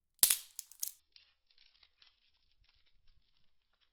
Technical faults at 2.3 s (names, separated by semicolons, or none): adaptive stream at a lower bitrate